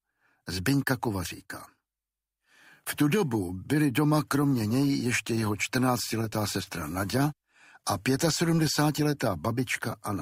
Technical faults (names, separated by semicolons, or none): short concealed packet loss